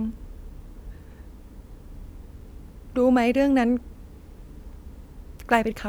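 From 3.91 s onward there is sample clock jitter: the converter's timing wanders by a few microseconds, misplacing samples on steep parts of the waveform. A grainy hiss about 30 dB down rises on loud, bright sounds and vanishes in pauses, unlike background noise.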